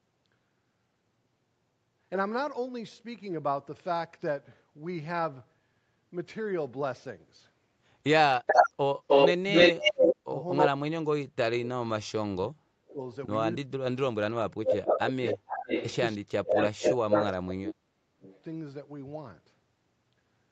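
From 8.46 to 10.69 s, an echo leak brings in a faint copy of the speech about 306 ms behind it, roughly 10 dB below the direct sound. The likely cause is a far-end echo canceller that left part of its loudspeaker pickup in the return signal. On a spectrogram the speech harmonics appear twice, the second set shifted right by about 0.3 s and paler.

Overlapping this, from 9.34 to 10.89 s, the speech is suppressed in double talk. It dips by as much as about 35 dB across about a second in total, sounding gated and broken. This was likely the canceller turning down the talker along with the echo. The waveform shows the envelope collapsing in chunks.

The same suppression returns at 12.27–13.0 s (about 40 dB deep) and 13.64–15.59 s (about 35 dB). Each appears as notched gaps in the waveform.

A second echo leak runs from 14.66 to 18.41 s, with a delay of 436 ms and a level only about 5 dB under the speech. 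It comes back as a trailing repeat. The likely cause is again residual loudspeaker pickup. On a spectrogram it shows as doubled formant tracks nearly as bright as the originals.

From 16.18 to 18.23 s, double-talk suppression cuts the speech by up to about 40 dB, leaving blank vertical stripes in the spectrogram. Throughout, nothing above 8 kHz is present.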